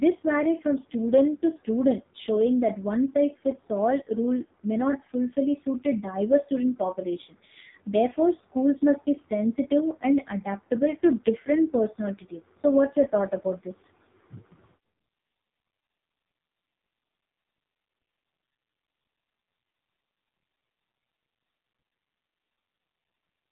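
Throughout, the speech sounds buzzy and synthetic, with nothing above about 3.8 kHz. This is heavy AMR narrowband mobile codec damage. A small set of pulses drives a vocal-tract model at such a low bitrate, which fits AMR-NB's 5.15 kbps mode.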